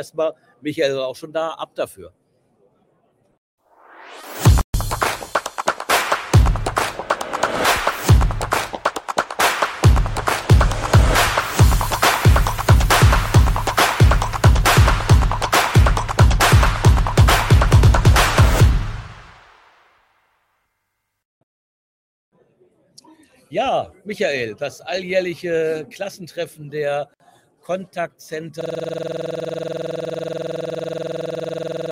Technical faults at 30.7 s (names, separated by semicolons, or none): system hang loop